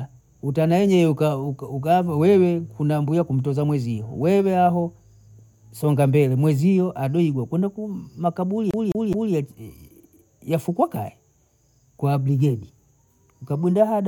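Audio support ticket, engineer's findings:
Speech stutters 8.71–9.34 s: CD stuck on one turn. Same 0.21 s segment plays three times, brief mute at each jump. Likely cause: scratched disc throwing laser back one track per revolution. Waveform: identical 0.21 s blocks with gaps. Spectrogram: repeating pattern, thin vertical breaks.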